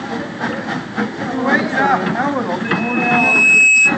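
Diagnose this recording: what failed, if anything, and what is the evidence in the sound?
From 2.65 s, a 2.6 kHz tone swells into a squeal lasting to 3.97 s: loudspeaker feedback squeal, the analogue mic-speaker loop's gain exceeding one.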